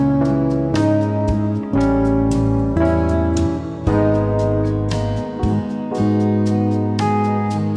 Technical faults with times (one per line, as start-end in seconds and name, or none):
none